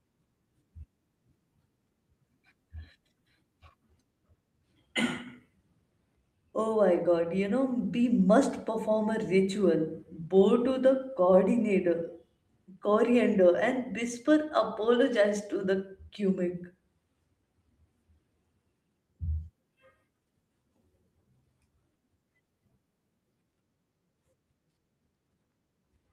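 No technical faults are audible anywhere in the speech recording.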